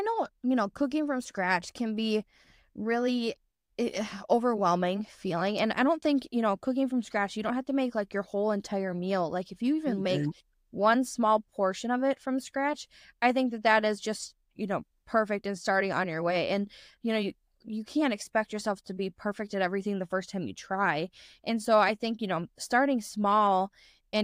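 No technical faults are audible.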